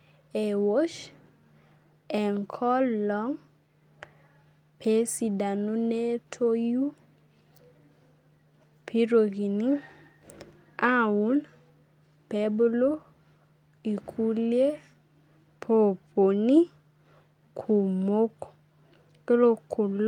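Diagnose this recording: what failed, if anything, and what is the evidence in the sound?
Nothing in this speech recording points to a failure at any stage, so there's nothing here to diagnose.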